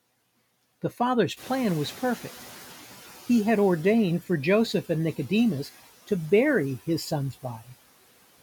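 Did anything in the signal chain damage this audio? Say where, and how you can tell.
Yes. The call-processing noise suppressor fell behind when the room noise jumped by about 13 dB at around 1.5 s. Its noise estimate was still tuned to the quieter background, so from 1.36 s the new noise passes through with too little reduction. Over about 1.6 s the estimate catches up, and by 2.95 s the noise has sunk by about 9 dB. The room noise itself is genuine and settles about 21 dB below the speech.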